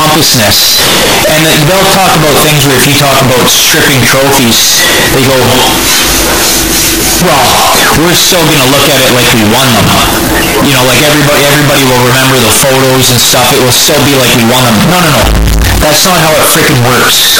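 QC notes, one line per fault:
Throughout: float read as integer. The 17 s speech clip is extremely loud and harsh, with background noise as loud as the speech, though pitch can still be followed. This is likely 32-bit float samples being read as 32-bit integers, so each sample's value comes from its sign and exponent bits rather than its real level. On a waveform the signal is a near-square block at an almost fixed, high level. A spectrogram shows dense broadband energy everywhere.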